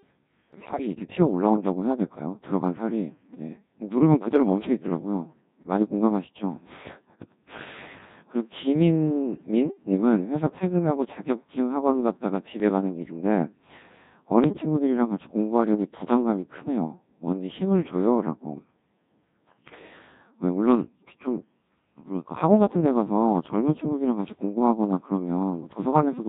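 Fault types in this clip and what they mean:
Codec 2 vocoder: the speech passed through Codec 2 at 1.6 kbit/s, which transmits only pitch, voicing, energy and spectral envelope and rebuilds speech from sine waves, so the original waveform is gone and the whole clip sounds heavily robotic and buzzy.
Bit errors on digital voice radio: flipped bits corrupted the frame parameters this vocoder depends on, so the synthetic speech suddenly jumps in pitch, level and tone colour, breaking into warbles and bleeps at 0.54 to 0.87 s, around 12.6 s and 14.44 to 14.62 s.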